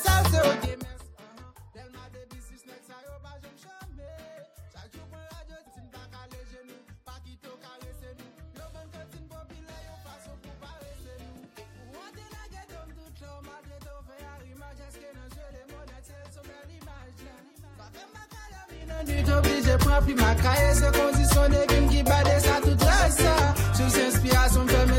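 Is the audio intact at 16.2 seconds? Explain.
Yes, the audio is intact at 16.2 seconds, with no fault at that moment.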